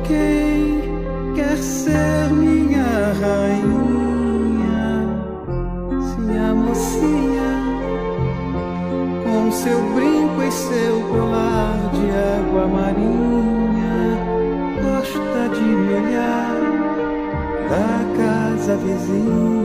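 Compressed frames skipped at 11.09 s and again at 13.70 s: the decoder never receives or rejects whole blocks of the coded stream, so playback leaps forward. The first gap drops roughly 50 ms, the second around 30 ms, which fits losing about two and then one frame of 26.1 ms each. Because adjacent frames overlap, each join comes out as a short smeared blip rather than a sharp click, with the sound abruptly further along.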